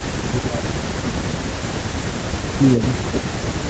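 From 0.25 to 1.57 s, the speech dips sharply, by around 20 dB, for about a second in total. This is likely speech suppressed in double talk. The echo canceller turned the talker down while the other side spoke. A second such dip runs from 2.55 s to the end. Between 2.76 and 2.83 s, a faint, delayed copy of the voice slips through, about 0.31 s late and far below the speech. This is likely an echo leak from a loudspeaker the canceller did not fully clean.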